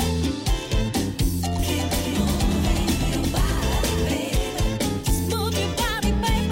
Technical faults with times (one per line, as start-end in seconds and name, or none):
1.59-4.07 doubled audio track